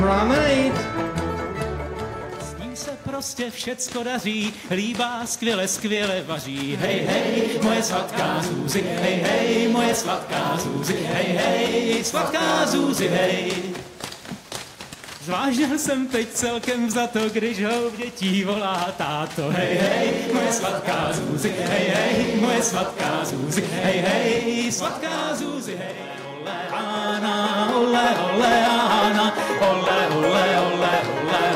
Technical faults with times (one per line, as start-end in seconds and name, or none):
0.00-31.56 hard clipping